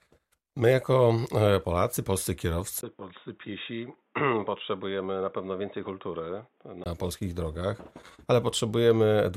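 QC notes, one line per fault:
2.81–6.86 s, input switched to a poorer device: a 20 ms gap, then dull, boxy sound cut off above 3.8 kHz, about 5 dB quieter, with faint new noise; likely a narrower-band microphone.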